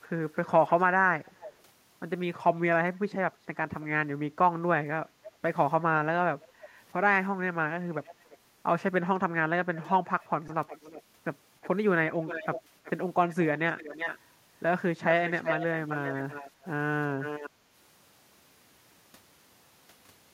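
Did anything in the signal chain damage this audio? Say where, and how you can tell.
Yes, two kinds of damage are audible. The first is an echo leak at the call-processing stage. A delayed, fainter copy of the speech trails the original at 0.03 to 1.62 s, 5.24 to 5.3 s, 6.41 to 6.68 s, 8.04 to 8.38 s, 9.74 to 14.19 s and 15.27 to 17.5 s. The delay grows from 311 ms to 383 ms. The copy is about 20 to 25 dB down early on and only about 10 dB down in the last two stretches. This is likely a loudspeaker at one end whose echo canceller let part of the pickup through. On a spectrogram each syllable's pattern reappears as a ghost about a third of a second to the right.

The second is a repeated buffer at the driver or buffer stage, heard at 10.48 s as a click or brief buzz. A piece 2.67 ms long plays four extra times, which fits a 128-sample buffer, and about 10 ms of new audio is lost. On a waveform it shows as identical short cycles butted together with hard joins. 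A spectrogram shows a thin vertical smear with a faint harmonic comb spaced at about 375 Hz.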